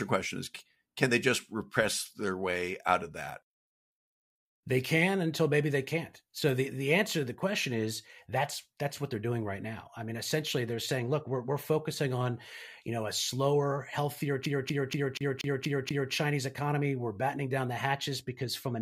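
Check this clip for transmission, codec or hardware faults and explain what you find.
One fault stands out in this speech clip: a CD stuck on one turn. From 14.46 s to 16.13 s, the same 0.24 s fragment plays over and over, seven times in a row. A scratch keeps knocking the laser back one track at the same point on each rotation. So the player rereads that short stretch instead of moving on. Each jump leaves a brief mute. The result is a fast, even stutter, like a skipping CD.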